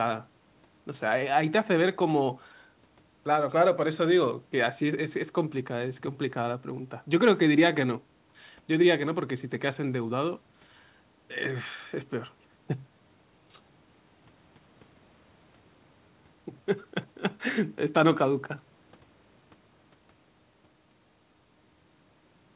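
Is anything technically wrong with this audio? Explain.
No, nothing is technically wrong: the speech stops at 4 kHz and carries the usual coding noise of a narrowband call path, which fits G.711 A-law at 64 kbps and is normal for such a call.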